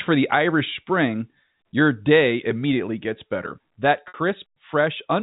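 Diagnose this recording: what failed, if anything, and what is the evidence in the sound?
Packet loss with pitch repetition, network stage, 4.08 to 4.14 s: a held, buzzy pitch period fills the 60 ms gap and fades, where a plain dropout would go silent.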